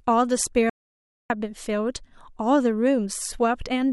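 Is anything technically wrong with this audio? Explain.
Yes. From 0.70 s to 1.30 s there is an audio dropout to silence. The input feeding the recorder was likely lost for about 0.6 s, through a disconnected device, a failed link or a brief mute, while the recording carried on writing silence. The speech stops abruptly mid-flow and then resumes just as suddenly. The gap is silent with no room tone, and whatever was spoken during those 0.6 s is missing.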